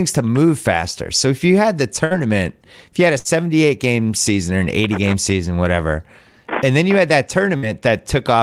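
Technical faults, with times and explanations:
2.05–2.14 s, 3.19–3.28 s, 7.57–7.65 s: burst of packet loss. About 60 ms of lost audio is concealed by stretching and fading the last sound. This shows as a smeared, fading band, then a jump where 60 ms of audio is skipped.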